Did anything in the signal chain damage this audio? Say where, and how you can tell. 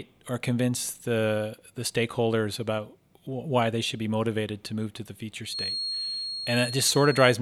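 Yes, from 5.42 s to the end there's a feedback whistle at 4.3 kHz, about 10 dB under the speech and swelling and fading slowly. It's likely an analogue speaker-to-mic loop hovering at the edge of feedback.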